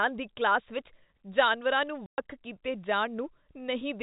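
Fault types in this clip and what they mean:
Packet loss filled with silence: a hard-edged gap of dead air about 120 ms long, from 2.06 to 2.18 s, where the sound stops and restarts abruptly. Its length fits several consecutive lost 20 ms packets, replaced with silence by the receiver.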